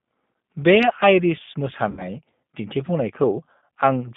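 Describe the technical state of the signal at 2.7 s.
At 2.7 s the speech carries G.729 codec damage, present throughout, with the line band limited to about 150 Hz to 3.6 kHz. At 8 kbit/s each 10 ms frame is rebuilt from a vocal tract filter, a pitch predictor and sparse pulses, so the speech sounds rough and synthetic. A spectrogram shows a bare band above 3.6 kHz and smeared harmonics.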